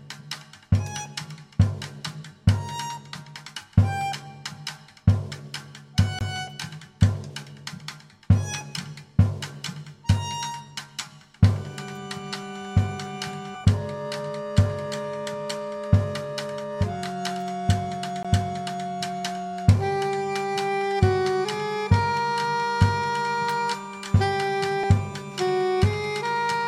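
CD skips at 6.19 s, 18.23 s and 24.83 s: the laser jumps to another turn of the disc's spiral, so the sound drops out with a tick, a brief mute of about 20 ms at the first two and only a couple of milliseconds at the last, and resumes from a different point.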